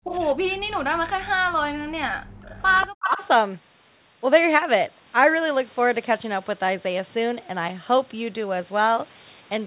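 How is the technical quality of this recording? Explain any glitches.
The recording has two recurring call faults: the speech is pushed down in places, and a delayed echo of it leaks back. The whole clip is also band-limited to about 4 kHz, which fits a narrowband G.711 phone path.

Speech suppressed in double talk occurs at 0.00 to 0.08 s, across a long stretch from 0.39 to 2.56 s, and again at 3.02 to 3.22 s. The likely cause is both ends talking at once, so the echo canceller could not tell the near talker from loudspeaker echo and attenuated everything. The speech sinks by around 40 dB in the first two spans, close to vanishing, and by about 15 dB in the last, sounding dipped.

Echo leak appears at 0.04 to 0.16 s and 2.58 to 3.28 s. A copy of the speech returns about 186 ms late, roughly 10 dB below the direct sound. It is likely leftover loudspeaker pickup that the echo canceller failed to remove and sent back down the line. 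It is heard as a repeat trailing the speech, the second instance lasting most of a second.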